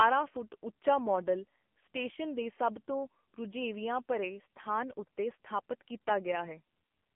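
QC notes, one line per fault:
throughout: AMR narrowband mobile codec. The speech went through a low-rate mobile codec, heavy damage fitting the 6.7 kbps AMR-NB mode. Its pulse-excited vocal-tract model turns the voice buzzy and synthetic, squeezed into a 200 Hz to 3.4 kHz band with nothing above 3.6 kHz.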